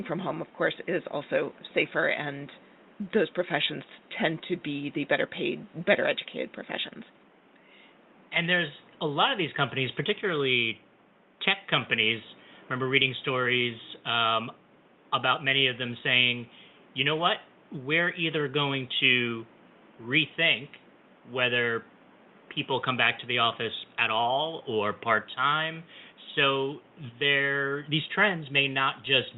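No faults to report: the speech sits about 29 dB above the room's background noise, and the call path's band limit near 8 kHz is ordinary behaviour for this kind of link.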